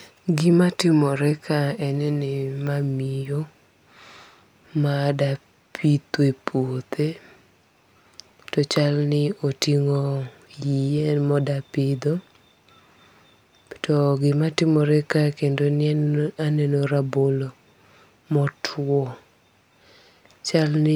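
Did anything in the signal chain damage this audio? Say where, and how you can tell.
No, nothing in this speech recording points to damage at any stage of the signal chain.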